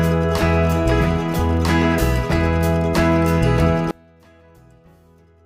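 From 3.91 s to the end at 5.46 s, the sound collapses to a faint remnant, about 32 dB quieter than before, with its solid centre almost gone. The likely cause is one channel inverted: one side of the stereo pair has flipped polarity, so whatever the two channels share cancels when they are summed to mono, and only the small difference between them survives.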